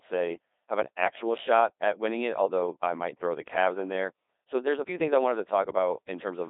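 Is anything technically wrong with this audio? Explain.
Yes, there are two problems. For the full length of the speech, the audio carries the sound of the Codec 2 vocoder. This decoder does not preserve the waveform. It rebuilds each frame from sine waves driven by transmitted pitch, voicing, energy and a coarse spectral envelope. The result here is heavy, robotic, buzzy damage. The frequency range is confined to roughly 300 Hz to 3.7 kHz, with nothing above 3.8 kHz, which fits one of the low-rate modes around 2.4 kbit/s.

From 4.59 to 5.40 s, the playback speeds up by about 5.9% and the pitch rises by about 99 cents, almost exactly a semitone. At 5.40 s both snap back to normal. Because speed and pitch move together and then abruptly return, the likely cause is a drift correction step: clock-matching software jumped the resampling rate to drain its buffer, then restored the nominal rate. 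The section sounds suddenly detuned and hurried.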